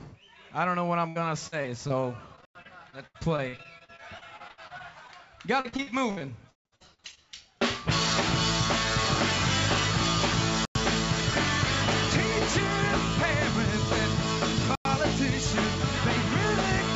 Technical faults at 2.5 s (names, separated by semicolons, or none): repeated packet loss (robotic sound); gap between chunks